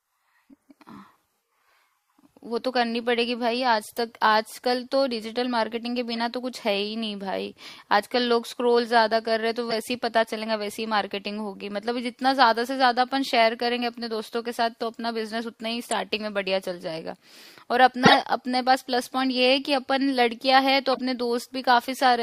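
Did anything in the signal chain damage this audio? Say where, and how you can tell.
Yes, at the codec. Corrupt frame decoded: short noisy bursts at 6.12–6.19, 9.70–9.74, 15.84–15.93, 18.03–18.15 and 20.92–21.00 s. Damaged frames misplace energy, about 15 dB louder at 18 s than elsewhere.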